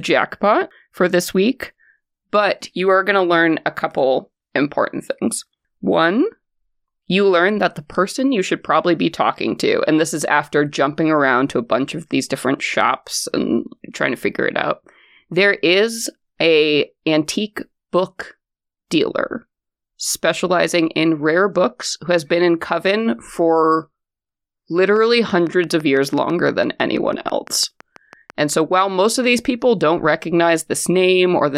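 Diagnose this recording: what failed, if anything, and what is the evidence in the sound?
A train of clicks runs from 24.96 to 28.31 s. About twenty, evenly spaced at six per second, near speech level. Likely analogue-wiring interference.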